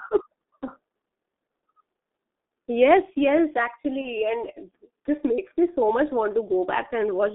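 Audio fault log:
Throughout: G.723.1 codec. The sound is coded at about 6.3 kbit/s in 30 ms frames over a line band of roughly 200 Hz to 3.6 kHz, giving a muffled, hoarse quality with smeared consonants. A spectrogram shows nothing above 3.6 kHz and coarse, blocky formant tracks.
4.01–4.08 s: VoIP packet loss concealed by the speech codec. One 30 ms frame went missing, and the decoder filled the gap by repeating its last pitch and filter at falling gain. The result is a brief fading smear just before "and this makes me". On a waveform it shows as a short decaying stretch, and on a spectrogram as a stretched, fading patch.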